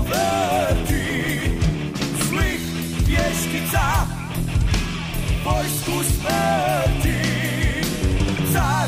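Nothing in this audio stood out as a technical problem on listening.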